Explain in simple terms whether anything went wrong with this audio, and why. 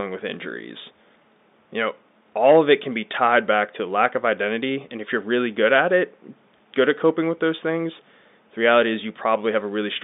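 Nothing went wrong here; the speech just has the narrow sound of an ordinary landline call, which is normal for telephone coding, and no glitches or dropouts turn up anywhere.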